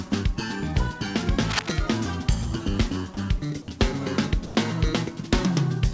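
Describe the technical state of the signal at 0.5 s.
At 0.5 s the signal is intact, with nothing wrong to be heard: it has passed through a WebRTC call path whose codec leaves nothing above about 8 kHz, which fits G.722.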